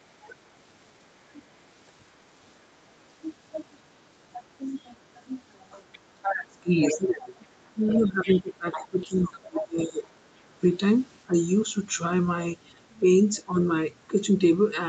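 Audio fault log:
5.92–6.32, 6.81–7.27, 7.87–8.39 and 8.72–9.62 s, other side's voice leaking through: a second, fainter voice sits under the main talker, roughly 5 to 15 dB below it, strongest in the first burst. The likely cause is loudspeaker playback reaching the microphone and not being fully cancelled. On a spectrogram, a second set of harmonic stripes overlaps the main speech. On the waveform, the bursts add a low, ragged layer.
6.04–10.07 s, speech suppressed in double talk: across about 3 s of this stretch, the main voice repeatedly dips and thins, falling by as much as 25 dB. The likely cause is an echo canceller clamping down on everything when both sides spoke at once. The spectrogram shows the talker's energy fading in patches, with the upper bands going first. The waveform envelope shows notched gaps.
10.45–10.58 and 14.08–14.17 s, speech suppressed in double talk: two short ducks in the same voice. 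The first is deep, about 20 dB. The second is slight, around 5 dB. They appear as brief vertical gaps on the spectrogram and dents in the waveform, with content above 8 kHz absent throughout.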